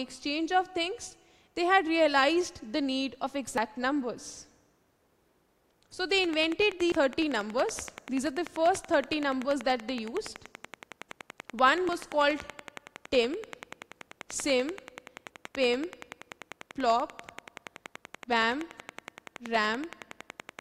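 At 3.58 s there is a sudden jump forward in the sound, roughly 50 ms missing, and the same dropped buffer (overrun) recurs at 6.92 s with about 150 ms gone and at 11.89 s with about 50 ms gone. Samples were likely overwritten before being read. Unlike a dropout, no silent gap is left.

From 6.24 s to 20.60 s a train of clicks ticks at a steady 10.5 per second, about 150 in all, peaking about 10 dB above the sound. The likely source is interference or a faulty connection or power supply. Their even spacing and persistence through pauses set them apart from the isolated overrun jumps.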